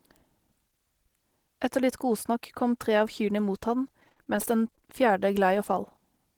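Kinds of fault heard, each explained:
Repeated packet loss (robotic sound): Right after "av kyrne mot han", from 4.00 to 4.83 s, the speech turns choppy and robotic. Packets keep going missing or arriving late. Each short hole is patched by stretching the last bit of sound forward. About a dozen brief holes follow one another, none longer than 35 ms. Roughly a quarter of that stretch is filled this way, about 200 ms in all, so pieces drop out.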